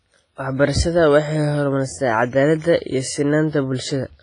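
Throughout the speech, the sound has the ringing, washy quality and signal-following hiss of heavy transform-codec damage, likely WMA compression at a low bitrate, around 24 kbps. Long blocks smear quantisation noise around each sound, weak components drop out, and nothing remains above 10.3 kHz.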